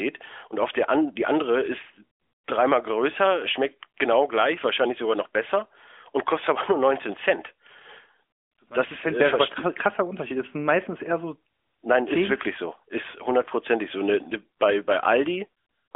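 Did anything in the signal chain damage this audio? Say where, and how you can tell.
No, nothing in the signal chain damaged this audio.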